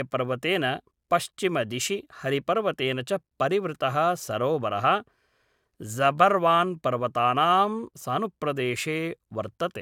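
No technical faults can be heard anywhere in this speech recording. Nothing calls for a timestamp or any further description.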